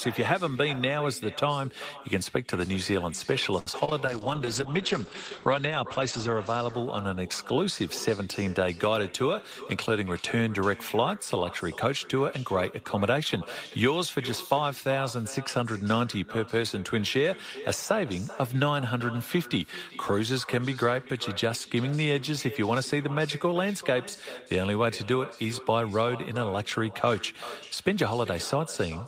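Right from the start there's an echo with no canceller: the far end's loudspeaker is feeding your voice back into its microphone, and nothing strips it out. Every phrase gets a thin ghost about 16 dB down, trailing by around 400 ms.

Between 3.59 and 4.02 s you hit repeated packet loss, the robotic kind. Four holes land in quick succession, the longest 71 ms, and each one is patched by stretching the previous sound. About a third of that stretch is concealment, so it comes out choppy, with pieces missing.

Right after, from 4.06 to 8.13 s, there's a call bitrate drop. The bandwidth estimate sagged, and the coarser coding and loss of top end fit a fall from roughly 32 to 10 kbps. The audio goes watery and muffled, capped near 8 kHz instead of 20 kHz, for about 1.8 s at its worst before clearing.

Finally, from 9.08 to 10.02 s, there's a jitter buffer speed-up. The receiver had too much audio queued, so it kept snipping out tiny pitch-period slices, around a tenth of a second in total. 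Pitch stays put, but things run about 8% fast and sound hurried.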